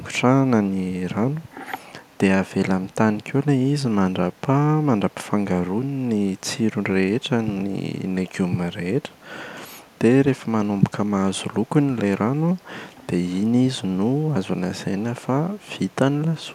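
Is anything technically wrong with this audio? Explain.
Yes. A brief echo leak occurs between 1.41 and 1.51 s in this speech clip. A faint delayed copy of the speech trails the original by 154 ms. It sits very low, roughly 40 dB below the direct signal, and lasts about a tenth of a second. The likely cause is a far end playing the call over a loudspeaker, where the echo canceller did not fully remove what its microphone picked up and sent that residue back.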